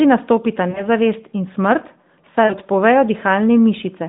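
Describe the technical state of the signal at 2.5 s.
At 2.5 s the signal shows lost AMR speech frames, from 2.46 to 2.54 s, a 40 ms gap consistent with two consecutive 20 ms frames failing their checksum. The decoder fills the gap by repeating the last good pitch and vocal tract settings at falling gain, so the speech is briefly drawn out and fades. On a spectrogram the harmonics inside the 150 Hz to 3.7 kHz band flatten into a held pattern and fade; the waveform envelope sags across the span.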